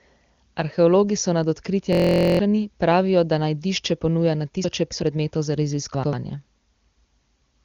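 At 1.93 s the playback system stalls in a system hang loop. The computer or driver stops feeding new audio while the sound hardware keeps replaying the same 23.22 ms stretch, which points to a 1024-sample buffer. It repeats 20 times until 2.39 s, so the speech collapses into a steady buzz at about 43.1 Hz, and roughly half a second of real audio never reaches the listener.

At 4.64 s the chunks play out of order. One 92.88 ms chunk was written three chunks late, so it lands after the material that should follow it. Until 5.02 s the speech sounds briefly jumbled, with hard joins where the order breaks. The same fault returns from 5.94 s to 6.13 s, this time with a chunk only one place late, giving a shorter scramble. The AMR-WB HD Voice codec holds the audio below about 7.3 kHz throughout.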